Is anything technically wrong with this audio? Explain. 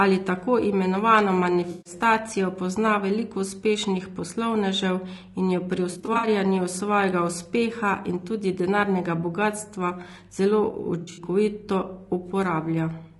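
Yes, two things. The whole speech track sounds rough and grainy, with noise filling gaps between harmonics and a thin top band. That's likely low-delay AAC compression (AAC-ELD), and short frames at roughly 32 kbps just can't hold the pitch detail.

Then there's AAC frame loss with concealment at 1.71–1.93 s right after "tako imenovano", 5.91–6.27 s after "in jo pri", and 11.01–11.23 s. The decoder patches missing frames from the last good spectrum, so you get smeared, noisy, phasey bits. That's about 140, 180 and 120 ms lost, the later two broken into short runs.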